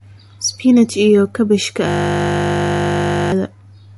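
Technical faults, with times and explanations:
Throughout, MP3 compression: the treble stops dead at 11.3 kHz and the speech sounds watery and swirly, likely from a low bitrate around 48 kbps.
1.88 to 3.32 s, system hang loop: a single 20 ms slice repeats exactly, giving a steady 50 Hz buzz instead of a dropout or silence.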